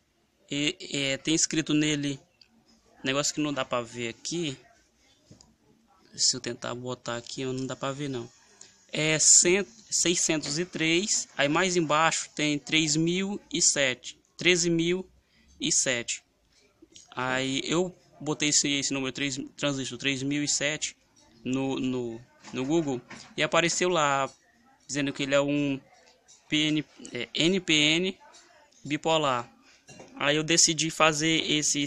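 Nothing goes wrong anywhere in this clip, so there's not a single technical fault to point to from the first moment of the audio to the last.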